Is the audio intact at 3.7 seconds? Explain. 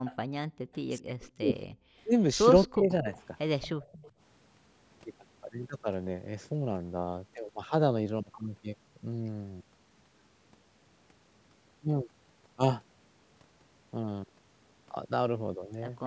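No, an echo leak runs from 3.61 to 4.08 s: a faint, discrete copy of the speech trailing by 229 ms, likely far-end loudspeaker sound the echo canceller missed, unlike smoothly decaying room reverb.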